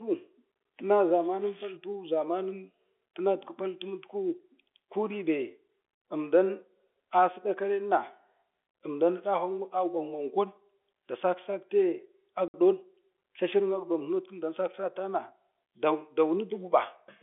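At 12.48 s there's packet loss filled with silence: a 60 ms hole with hard edges, which fits a run of lost 10 ms packets, over the narrowband G.711 telephone sound.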